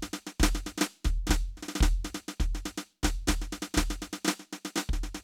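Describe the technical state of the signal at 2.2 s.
At 2.2 s the music plays through intact, with no audible fault at that moment.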